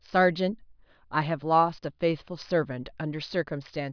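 No technical faults are audible.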